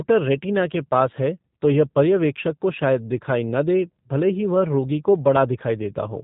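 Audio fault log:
Throughout: G.729 codec, speech rebuilt from filter, pitch predictor and sparse pulses at 8 kbit/s; nothing above 4 kHz, plainly rough and synthetic.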